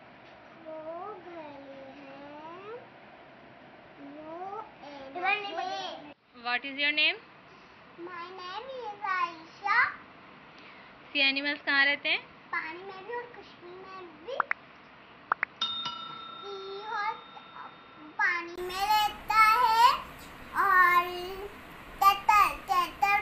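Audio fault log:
0.0–18.58 s, input switched to a poorer device: The sound is dull and boxy, with nothing above 5.8 kHz. It sits about 5 dB lower and carries faint added background noise. A 20 ms silence at 18.58 s precedes fuller, brighter sound. A narrower-band input was likely in use.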